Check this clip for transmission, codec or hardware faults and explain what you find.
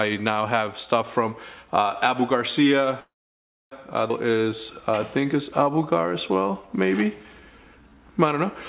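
Three transmission faults appear, all from a call path whose audio stops at 4 kHz, which fits a narrowband G.711 mu-law codec.

From 3.0 to 3.73 s there is a call audio freeze. Packets were likely held up in transit, and the jitter buffer ran dry. The receiver kept the last sound going as a short fading continuation and then went silent for about 0.63 s of the 0.71 s gap. When packets resumed, the audio picked up exactly where it left off, so nothing was lost, but the timeline was pushed back by about 0.71 s.

At 4.1 s there is a skip ahead. A stretch of audio, roughly a third of a second, was dropped either in transit or by the jitter buffer shedding excess delay while later audio was already queued. Playback jumps forward with only a tiny join of a few milliseconds. The material on either side of the cut runs almost directly together, and that portion is gone.

From 4.26 to 7.96 s there is a jitter buffer slow-down. 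With its reserve low after the skip, the buffer rebuilt its cushion by repeating single pitch periods and slivers of pauses many times over. This added about 336 ms, so this stretch plays at roughly 91% speed. The pitch stays the same, but sounds are drawn out and the timing feels stretched.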